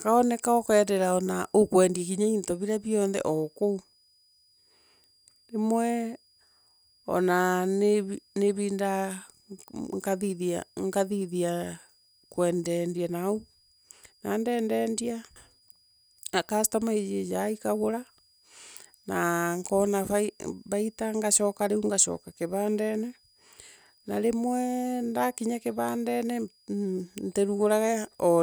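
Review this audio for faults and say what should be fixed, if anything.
A faint high whistle, wandering between about 4.81 and 4.96 kHz and sitting roughly 40 dB below the speech, runs through the whole recording. It is switching supply whistle: a nearby switching power supply is cycling at an audible rate, and its pitch shifts slightly as its load changes. To prevent it, power the recording chain from a linear or well-filtered supply and keep switching adapters away from the microphone, preamp and their cables.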